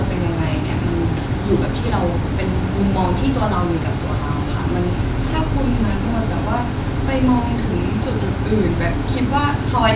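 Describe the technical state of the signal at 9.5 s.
At 9.5 s the speech signal is intact, with no audible fault at that moment.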